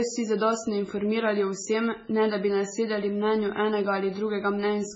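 From start to end, the speech carries heavy damage that is likely MP3 compression at a very low bitrate, around 16 kbps. Nothing sounds above 7.7 kHz. Weak frequency lines flicker between frames. The sound turns watery and swirly, with metallic chirps and smeared attacks.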